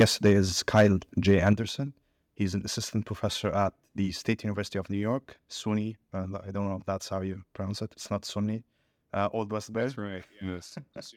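From 0.00 to 0.32 s, 0.74 to 0.87 s and 1.28 to 1.53 s, peaks sound flattened and crackly, likely microphone overload, with input running about 7, 5 and 2 dB past full scale. Level drops abruptly at 0.02 s (about 3 dB), 1.53 s (about 7 dB) and 4.32 s (about 2 dB), likely the microphone volume stepped down by call software reacting to clipping.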